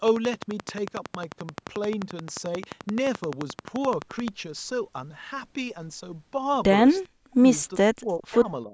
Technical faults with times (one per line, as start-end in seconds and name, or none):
0.08-4.29 train of clicks
7.06-7.44 speech suppressed in double talk
7.79-8.74 speech suppressed in double talk
8.20-8.37 echo leak